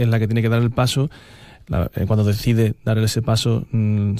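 No dropouts, clicks, distortion or other faults turn up anywhere in the recording.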